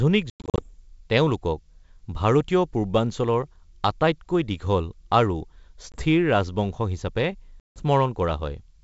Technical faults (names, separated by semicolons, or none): packet loss on an ADPCM call